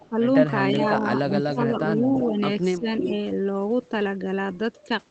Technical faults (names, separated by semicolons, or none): echo leak; speech suppressed in double talk